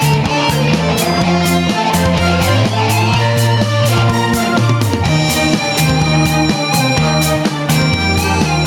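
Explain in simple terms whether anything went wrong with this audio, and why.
Something went wrong with the level control. The recording level was most likely set far too high for the microphone, so an automatic limiter kept grabbing the volume and pulling it down every time a loud sound came in. That is gain pumping, and it runs through the whole clip. Loud and soft parts sit unnaturally close together, and the sound feels squashed.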